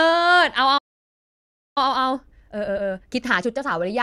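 A speech recording with a playback stall followed by time-compressed catch-up. At 0.77 s the audio cuts out mid-flow and stays silent for about 0.98 s, until 1.78 s. The likely cause is the player running out of buffered data or its audio thread being blocked, so nothing reached the output until it recovered. Sound returns at 1.78 s. From 1.78 s to 3.74 s the player works through the backlog by time compression, cutting out short pieces of the signal and cross-fading across the gaps. The speech runs at 1.5 times normal speed but keeps its normal pitch, because samples are dropped rather than played faster. The repeated splices give that stretch a hurried quality.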